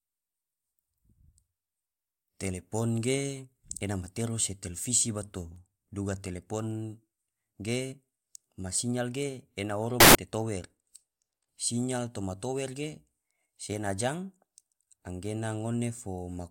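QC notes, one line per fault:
10.00–10.15 s, samples built from the wrong bytes: right after "sinyal ge ena oro" the speech is swamped by a burst of loud, harsh broadband noise for about 0.15 s. The bytes of each sample are being assembled wrongly, so the rapidly changing low bits end up as the large part of every value.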